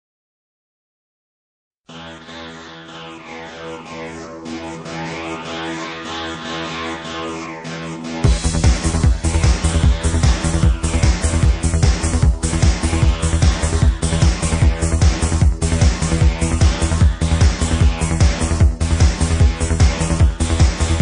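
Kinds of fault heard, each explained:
MP3 compression: Throughout the clip the sound has a watery, swirling quality, with faint tones flickering in and out from moment to moment and attacks smeared. The damage is plainly audible and likely comes from MP3 encoding at a low bitrate, which fits something around 40 kbps. Unlike a plain low-pass filter, the loss here is unstable and shifting rather than a steady, clean dulling of the treble.
Pre-echo: At about 1.86 s a short burst of hiss runs for about 30 ms ahead of a sharp attack, rising about 17 dB above the quiet that precedes it, and the attack itself sounds softened. The codec spread its noise across a whole transform block, about 52 ms long, so noise meant for the loud onset leaked into the silence before it. The block never switched to shorter blocks. Unlike a click or a reverb tail, this noise comes before the event, not after it.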